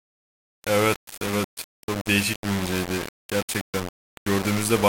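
Speech, and it's gritty from start to finish: a grainy distortion rides along with the voice and shifts as the level changes, with the quietest bits sputtering or dropping out between steps. The error sits only about 10 dB below the signal. That points to low bit depth without dither, likely from rounding to something like 4 bits, so the quantisation error tracks the signal instead of becoming a steady hiss.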